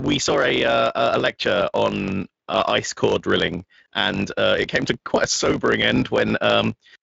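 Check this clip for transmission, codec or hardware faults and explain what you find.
There's one fault running through the whole clip, a block size mismatch (truncated), and the Speex coding on top of it only adds a little light roughness. From start to finish there's a steady 50 Hz buzz under the speech, and everything runs about 1.07 times fast while the timbre stays put. One stage is writing longer blocks than the next one reads, so the tail of every block gets dropped. The buzz comes from that chop repeating, and the speed-up is the ratio of the two block sizes, which fits 1024-sample blocks being cut short.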